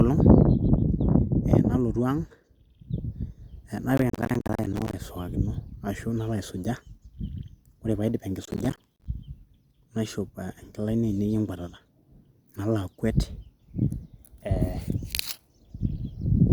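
Speech carries two bursts of processor overload crackle, from 3.97 to 5.00 s and from 8.44 to 9.06 s. The processor keeps missing its deadlines for buffers of around 10 ms, and each missed buffer drops out as a hard-edged sliver of silence. Dozens of these in a row give a gritty tearing. Clipping distortion follows loudness, but this tearing starts and stops abruptly with the load.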